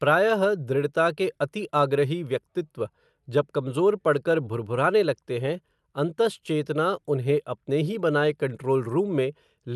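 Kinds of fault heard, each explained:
No faults are heard.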